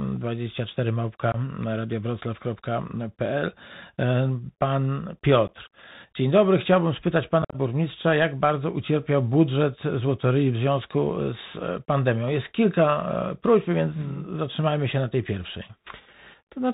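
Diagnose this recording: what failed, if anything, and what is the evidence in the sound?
Codec stage: the Bluetooth CVSD headset codec is plainly audible throughout, with nothing above 4 kHz, scratchy s sounds and granular hiss. This fits a 64 kbps CVSD link; unlike simple low-pass filtering, it adds distortion.

Headset link: unconcealed Bluetooth headset packet loss cuts abrupt holes near 1.32 s and 5.48 s, then scattered gaps from 7.42 to 7.56 s. Unlike concealed loss, nothing fills the gaps.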